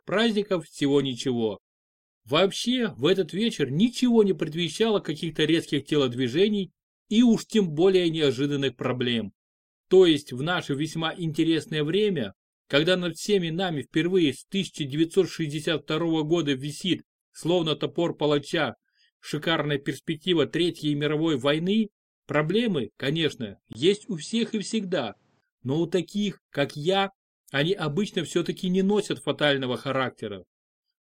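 At 23.73 s a 20 ms gap opens, and until 25.42 s the sound stops at 8.8 kHz, at similar level, over a faint new noise floor roughly 40 dB down. The gap and changed background point to a likely input switched to a poorer device, not a filter.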